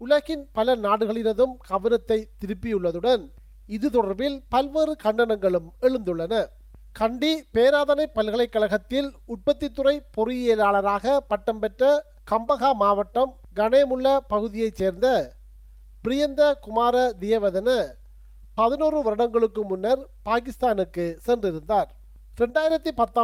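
No technical faults are audible.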